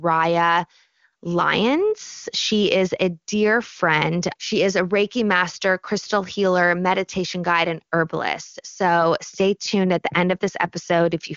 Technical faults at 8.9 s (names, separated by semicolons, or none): none